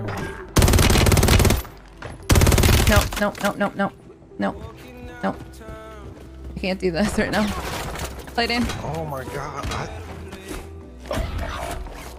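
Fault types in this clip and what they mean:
No technical faults are audible.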